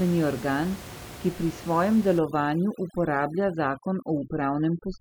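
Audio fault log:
2.19–5.01 s, overdone noise removal: after "organ ki pri svojem", a noise reducer set too strong shuts off any band near the room noise floor (about 17 dB below the speech), taking quiet speech detail too; the background drops and breaks up into twinkling specks.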